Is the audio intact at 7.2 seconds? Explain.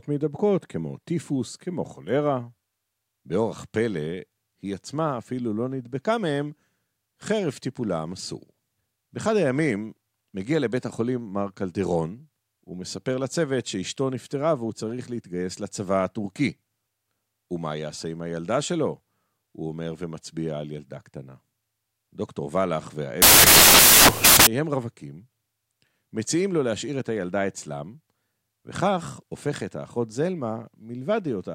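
Yes, the speech at 7.2 seconds plays through cleanly, with no dropout, click, distortion or other fault audible at that moment.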